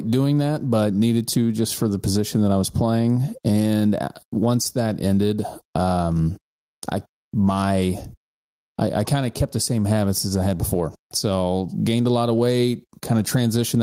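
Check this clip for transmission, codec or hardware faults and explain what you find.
One hardware fault is present: gain pumping, running through the whole speech clip. The input gain was likely set far too high, so a fast limiter clamps down on every loud syllable by around 15 dB, leaving the speech squashed and flat in level.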